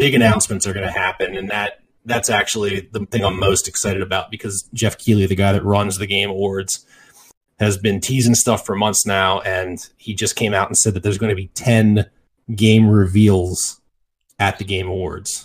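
From 0.0 to 4.0 s the adaptive stream starts at a low bitrate. Treble is dull, artefacts are strong, which fits 32 kbit/s AAC. Quality then jumps without a gap.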